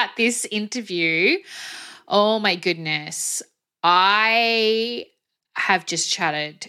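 Speech recording, no audible technical faults found.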